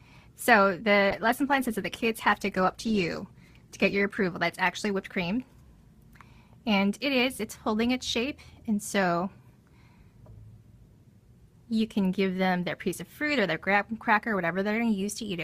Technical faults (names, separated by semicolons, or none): call bitrate drop